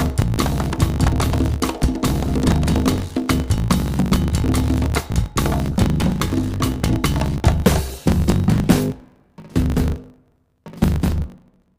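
A block size mismatch (truncated) runs throughout: the tail of each block, consistent with 1024-sample writes, is dropped, causing a 50 Hz buzz and sound running about 1.16 times fast.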